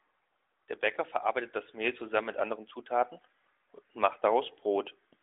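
Nothing stood out as a technical fault on listening.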